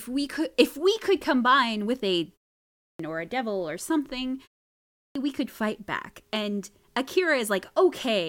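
A speech clip with a clipped start after a pause, twice. After "could combine with a", 2.59 to 2.99 s vanishes, about 400 ms. After "a devil or something", 4.79 to 5.15 s is lost, about 360 ms. The output device sleeps in short gaps and wakes late, swallowing each onset. The pauses themselves drop to silence as expected.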